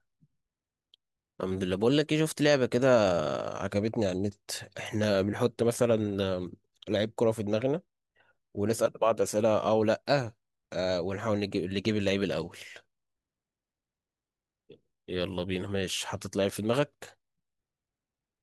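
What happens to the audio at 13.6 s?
Nothing goes wrong at 13.6 s: the speech carries on intact through that moment, with no dropout, click or distortion.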